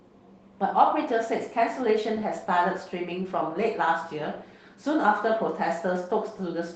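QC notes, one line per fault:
No faults heard in this speech clip.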